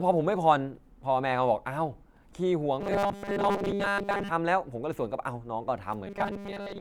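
From 2.81 to 4.30 s, and again from 6.07 s to the end, the speech turns into a rigid, metallic buzz locked at 200 Hz while still loosely tracking the words. This is robotic sound from repeated short buffers, likely caused by audio arriving too seldom: the software refills the gap by looping the last few milliseconds, here about 5 ms to match the 200 Hz buzz, so most of the real signal, roughly two thirds or more, is skipped.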